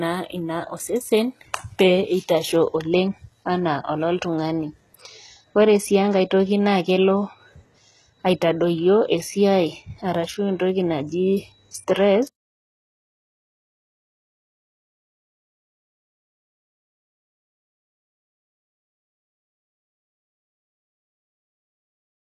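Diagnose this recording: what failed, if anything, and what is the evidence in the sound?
The damage sits at the codec stage and runs through the whole speech clip. The treble is bright but synthetic, with nothing above 12.4 kHz and plainly audible gritty texture, which fits a low-rate stream around 16 kbps. Likely HE-AAC compression: spectral band replication copies lower bands upward, unlike a plain low-pass codec that simply dulls the top.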